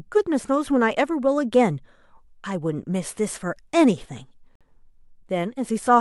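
At 4.55 s the speech drops to silence for about 52 ms, resuming at 4.61 s. This is a Bluetooth stall, likely caused by interference delaying radio packets so the headphones' buffer emptied and playback paused until retransmitted data arrived.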